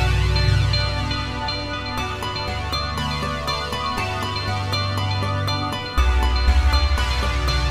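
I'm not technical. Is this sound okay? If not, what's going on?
Yes, this sound is okay. Nothing in it points to a technical problem you would need to worry about.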